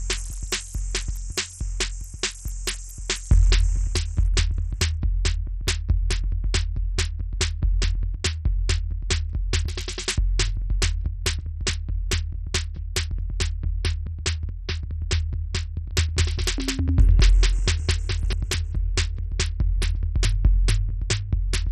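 From start to finish the music carries heavy damage that sounds like Bluetooth SBC compression, the likely cause being a starved bit pool at a rate that points to around 64 kbps. Nothing survives above 14 kHz, and the remaining upper bands are coarsely quantised, so the treble sounds dull and gritty, with a grainy noise riding on the sound. On a spectrogram the energy stops at a hard ceiling near 14 kHz, with blocky, patchy texture beneath it.

Between 15.91 and 18.33 s the music plays as a doubled audio track, likely from a second copy mixed in out of step. A full-band duplicate about as loud as the original trails it by roughly 200 ms, so every attack is struck twice, like a dry slapback with no decay or room colour. It cuts in and out abruptly at both ends. On the waveform each transient in that span has a twin of similar height about 200 ms later, and the spectrogram shows the same comb of onsets repeated.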